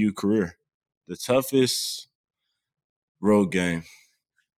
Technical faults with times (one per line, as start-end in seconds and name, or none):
3.20-4.57 resampler restarted on every block